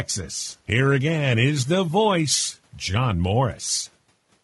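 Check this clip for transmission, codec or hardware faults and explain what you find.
One fault runs through the whole speech clip: low-delay AAC compression. The voice sounds rough and grainy from start to end. Noise fills the gaps between harmonics, and the top band sounds thin and synthetic. The likely cause is AAC-ELD, the low-delay codec of video calls. Its short frames resolve pitch harmonics poorly and need more bits. The damage is plainly audible, which fits a bitrate around 32 kbps. Faint room noise, about 43 dB below the speech, belongs to the recording.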